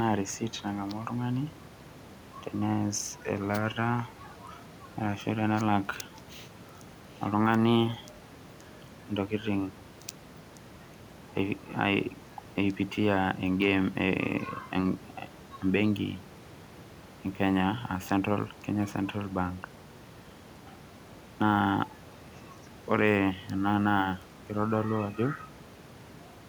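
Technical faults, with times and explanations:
No technical faults are present.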